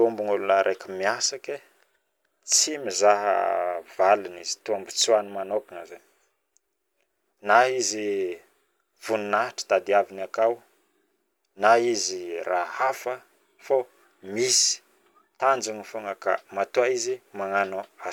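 No technical fault can be heard anywhere in the speech recording, with the signal holding steady and intact throughout.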